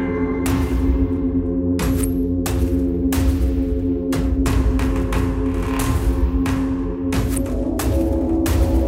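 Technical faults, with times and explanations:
No technical faults can be heard anywhere in this audio. There is nothing to report at any point in time.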